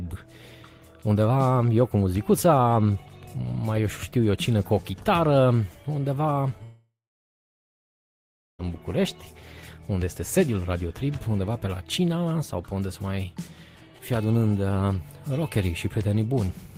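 From 6.63 to 8.61 s, a likely long network dropout: a fading buzz, then about 1.7 s of silence, and the sound resumes with the lost stretch skipped, not delayed.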